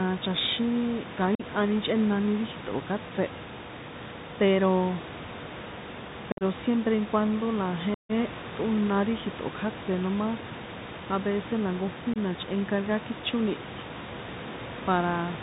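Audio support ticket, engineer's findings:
Narrowband, boxy sound throughout; nothing above 4 kHz, scratchy s sounds, granular hiss under the speech, loud bright passages distorting. Probable component: Bluetooth CVSD headset codec. The one-bit up/down encoding fits a 64 kbps link, and its adaptive step cannot track fast, loud high-frequency movement, so it falls behind and distorts. Room noise sits about 15 dB below speech, separate from the codec hiss.

Abrupt dropouts with hard edges, speech briefly quieter on return. At 1.35–1.42 s, 45 ms gone just before "chꞌénani ri". At 6.32–6.43 s, 82.5 ms scattered over 90 ms, longest gap 52.5 ms, chopped and crackly. At 7.94–8.12 s, 150 ms hole between "cuando la" and "ṭꞌóna ri". At 12.14–12.18 s, 22.5 ms. Probable component: unconcealed Bluetooth headset packet loss. Lost voice packets are filled with silence or an idle pattern, and the CVSD step size restarts low.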